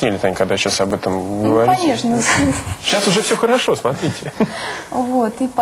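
Audio missing between chunks is the likely cause here: the capture path appears to work in 2-second blocks and drops a few milliseconds each time one block closes and the next opens, splicing the two sides together with no gap. The result is three tiny skips, at 0.91 s, 2.90 s and 4.89 s, spaced almost exactly 2 seconds apart, where the sound jumps forward abruptly rather than pausing.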